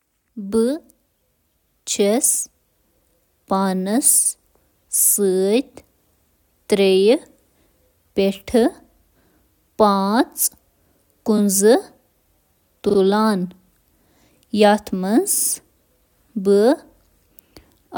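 Repeated frames stutter the speech four times. At 4.24 to 4.31 s a 64 ms block plays twice. At 11.37 to 11.39 s a 21 ms block repeats once. At 12.88 to 12.97 s a 43 ms block plays three times in a row, and at 15.36 to 15.49 s a 43 ms block plays four times. Each repeat re-decodes the same compressed frames, so a short slice of sound returns, stretching the audio by up to 128 ms.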